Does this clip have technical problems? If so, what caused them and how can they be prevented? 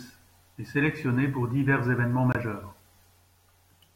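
Yes. At 2.32 to 2.36 s, right after "sélectionné pour divers évènements", the speech cuts to silence and then resumes. This matches a Bluetooth dropout. The most likely cause is that audio packets reached the headphones too late and were discarded. The playback clock kept running, so about 23 ms of audio is missing rather than delayed, which fits one lost packet. To prevent it, keep the headphones close to the source with a clear line of sight and away from busy 2.4 GHz traffic.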